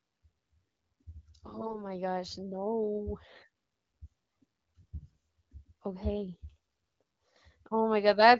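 From 1.44 to 1.85 s, and again from 4.79 to 5.16 s, AMR bit errors make the speech hoarse and gargly. Flipped bits misplace excitation pulses and skew pitch, gain and spectrum values. The second burst, at around 15% bit errors, sounds rougher than the first, at around 7%. The light wideband codec character fits AMR-WB at about 12.65 kbit/s.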